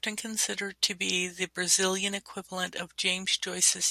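Speech with one corrupt frame decoded, from 1.31 to 1.34 s, just after "considered to be". Flipped bits in the compressed data for what sounds like a couple of consecutive frames went into the decoder, which played them back without rejecting them. The misread values put energy at frequencies where it does not belong for about 32 ms, heard as a short, faint glitch over the speech, peaking at roughly -40 dBFS.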